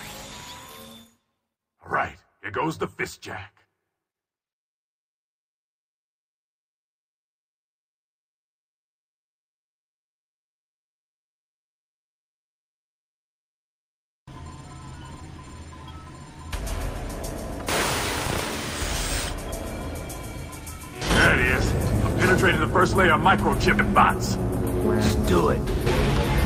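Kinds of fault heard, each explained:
No technical faults detected in this recording.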